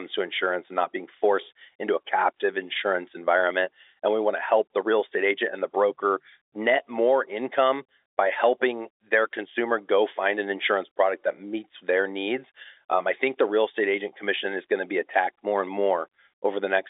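No technical faults can be heard anywhere in this recording.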